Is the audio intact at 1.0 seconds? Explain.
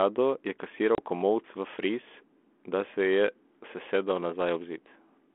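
No, 1.0 s sits at the end of a packet loss on an ADPCM call running from 0.95 to 1.0 s. About 30 ms of speech, a few packets, drops to hard-edged silence. Unlike a plain dropout, the G.726 decoder's adaptive predictor and step size lose track of the sender's, so the speech comes back rough before settling.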